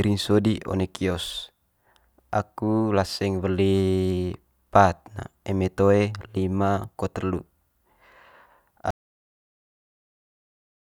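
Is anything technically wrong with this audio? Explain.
Yes. At 8.91 s the speech cuts out mid-flow and never returns. This is an audio dropout to silence lasting about 2.0 s to the end. The input was likely lost, with silence written afterwards. The gap is total silence, with no room tone.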